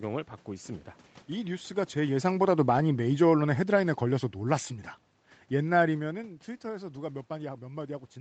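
A speech clip with two technical faults. The first is automatic gain falling. From 1.95 s to 4.73 s the level sinks by about 6 dB. The gain control judged the input too loud, or its background noise too strong, and turned itself down step by step. The room noise behind the speech drops with it, which marks it as a gain change. A talker movement near 2 s is a separate, natural level shift. The second fault is lost packets rebuilt from error correction. Six single packets go missing, at 2.77, 2.97, 3.03, 3.11, 3.77 and 3.99 s. Each covers 20 ms. There is no gap, because the next packet carried a low-bitrate Opus copy of each one. The decoder played those copies instead. These brief moments sound rougher and noisier than the speech around them.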